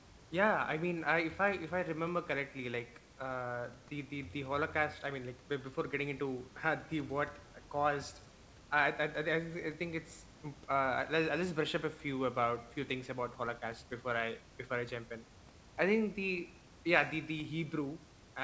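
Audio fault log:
No technical faults detected.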